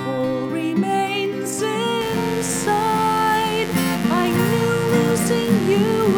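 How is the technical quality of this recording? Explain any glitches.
The recording has one clear fault: a mains buzz that enters at 2.01 s and runs to the end at 6.18 s. It sits roughly 15 dB below the main sound. The source is 50 Hz mains. A dimmer, rectifier or poorly shielded cable injects sharp switching spikes twice per cycle, so the interference repeats 100 times a second. Those spikes carry harmonics of 50 Hz far up into the kilohertz range. The result is a steady, raspy buzz rather than a smooth hum.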